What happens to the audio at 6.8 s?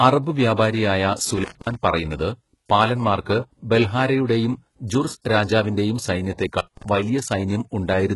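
Right at 6.8 s you're at the tail end of an intermittent contact dropout, which runs from about 6.58 to 6.84 s. It behaves like a loose cable or plug briefly losing its connection: the line is open for roughly 167 ms inside that span, so the speech breaks up and drops away, with crackle at the edges where the contact opens and closes again, and hiss left in the gap while it's open.

Running through that moment as well as the rest of the clip is heavy codec damage, likely HE-AAC compression at a very low bitrate, around 12 kbps. The codec keeps only the lower band and rebuilds the treble by copying lower bands upward and shaping them with a coarse envelope, so the top end isn't the original and its harmonics don't line up with the lower band. There's nothing above 11.5 kHz, and the s sounds come out gritty, metallic or lispy.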